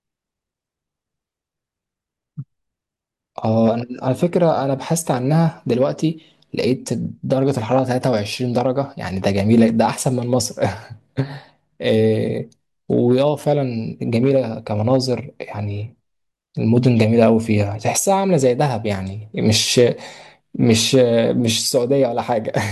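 No technical faults are audible.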